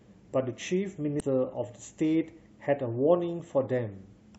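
Damaged data in a compressed stream appears at 1.2 s. A corrupted patch of the encoded speech throws the decoder off its frame boundaries, so it misreads those bytes and briefly hunts for the next valid header, leaving a very short chirp, squawk, click or hole.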